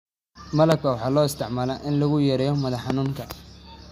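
Loud pops land in this speech clip at 0.72 to 0.74 s and again at 2.90 to 3.08 s. The first is a single sharp crack peaking about 20 dB above the speech. The second is a pair of thumps in quick succession, about 15 dB above it. Each is likely a sudden voltage step, such as a plug, switch, static discharge or driver glitch, shaped by the following circuitry into a brief pulse, while the speech carries on underneath.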